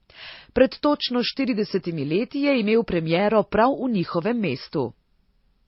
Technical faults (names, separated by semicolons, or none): transcoding between lossy codecs